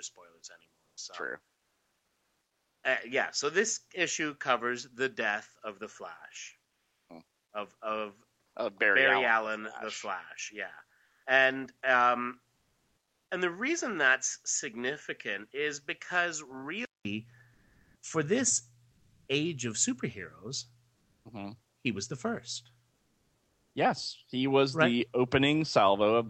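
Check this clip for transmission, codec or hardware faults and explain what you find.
Yes, three kinds of fault are audible: a poorer input device, comfort noise filling the pauses, and one clipped onset.

Input switched to a poorer device: From the start to 17.05 s, nothing reaches above 7.6 kHz and the level sits about 5 dB lower. A 200 ms silence marks the point where the sound clears. This is likely a change of input device mid-recording. Unlike codec band-limiting, it changes tone and level together at one switch point.

Comfort noise in place of the background: This happens at 0.85–2.83 s, 6.67–7.09 s, 11.05–11.23 s, 12.55–13.27 s, and 17.53–19.27 s just before "age of superheroes". It also happens at 20.95–21.25 s after "age of superheroes" and at 22.93–23.71 s after "he was the first". In these pauses the sender likely stopped transmitting (Opus DTX), and the receiver filled the gaps with synthetic noise. 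The fill is steady and featureless, and at 6.67 s it is about 13 dB quieter. It differs from a device switch because it appears only in pauses.

Onset clipped by the voice detector: At 7.09 s, right where the comfort noise ends, the first 20 ms of sound are missing. The detector likely reacted late, so the onset was never sent. The sound begins abruptly without its soft start. Unlike a dropout, the loss sits exactly at the resumption after a pause.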